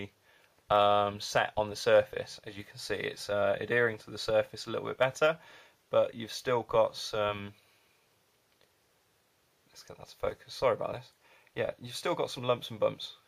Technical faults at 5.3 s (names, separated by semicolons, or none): none